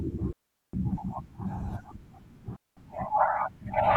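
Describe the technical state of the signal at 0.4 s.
A digital wireless dropout runs from 0.33 to 0.73 s: the receiver lost too much data and muted, leaving a clean 406 ms hole of near silence, without noise bursts.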